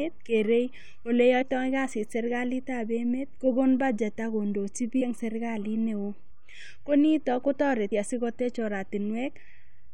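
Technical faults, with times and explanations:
1.41–1.43 s, 5.00–5.02 s and 7.91 s, compressed frames skipped: whole frames were dropped as missing or rejected by the decoder, so the speech jumps ahead about 50 ms after "kerei ole", about 100 ms before "eng' serikalit neo", and about 50 ms after "ko nito".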